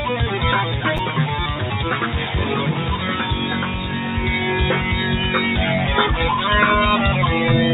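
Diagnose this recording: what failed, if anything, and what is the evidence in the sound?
Call processing: a noise suppressor meant for speech is applied to this music or sound throughout. Held material and tails are treated as noise, so the level pumps by roughly 5 dB.

Buffer stage: chunks are out of order from 0.97 to 0.99 s. A 10 ms chunk plays one slot late, causing a brief jumbled moment.

Call processing: sound is cut by the noise suppressor from 3.65 to 3.91 s. The sustained portion sinks by about 4 dB for roughly a fifth of a second.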